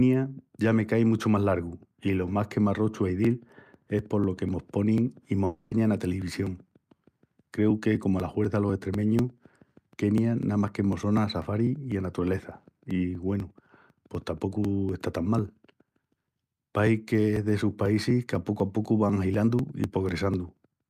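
The clip is speech. Just after "más que m'arrochu a", at 3.25 s, periodic USB or driver dropouts begin and continue to the end. Small pieces of audio are skipped every 0.25 s, producing regular ticks under the signal. A background task is stalling the audio driver on a fixed schedule. From 5.45 to 5.73 s, the speech gives way to a fading buzz or hiss continuing the last sound, about 0.26 s long, before the audio resumes. This is likely a long network dropout, with the receiver filling the gap and losing the original audio.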